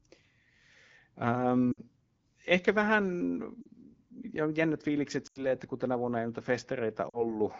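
Speech, carried over the AMR wideband (HD Voice) codec, has lost AMR speech frames: corrupted frames made the decoder extrapolate with fading gain, smearing and dipping the speech at 1.72–1.80, 3.61–3.68, 5.27–5.45 s (between "ja jännät fiilikset" and "että kun tänä vuonna"), and 7.10–7.25 s.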